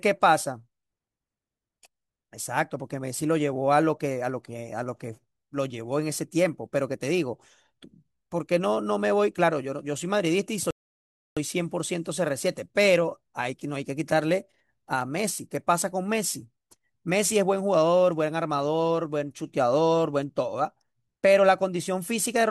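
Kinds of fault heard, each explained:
Rebuffering stall: the player ran dry of downloaded audio partway through and just sat there waiting for more to come in. You hear the speech drop to dead silence at about 10.71 s and pick back up at 11.37 s, continuing from exactly where it left off. Nothing gets skipped or repeated; the clip is simply about 0.66 s longer than it should be because of that gap.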